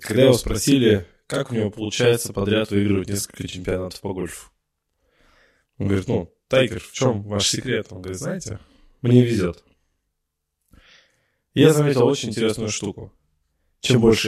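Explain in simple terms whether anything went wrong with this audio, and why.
Something did go wrong, and it lasts the whole clip: a channel delay, heard as doubling. One side of the recording arrives about 40 ms late, and when both sides are mixed into one, the late copy sits right behind the original at the same loudness. The speech sounds doubled, like a quick slap echo. A much shorter delay would instead give a hollow, tinny colour, and room echo fades gradually rather than repeating once at full strength.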